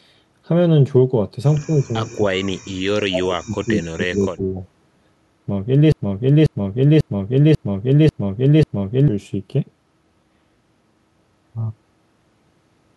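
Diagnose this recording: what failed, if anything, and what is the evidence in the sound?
Call processing, with speech suppressed in double talk as the likely cause: between 1.66 and 4.57 s the speech dips in four stretches, at 1.66, 2.09, 2.92 and 3.93 s, by anything from about 5 dB to about 40 dB. The echo canceller is ducking the near talker. Graded, partial dips mark this apart from clean network dropouts.

Playback or stream buffering: from 5.92 to 9.08 s a 0.54 s fragment repeats exactly, six times back to back, the likely sign of a broken-record loop where a stalled source resent its last buffer. The repeats are identical and do not decay, so this is not echo, and the sound due there is lost.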